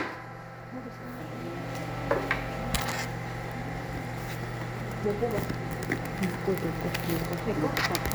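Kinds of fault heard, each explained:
No faults can be heard.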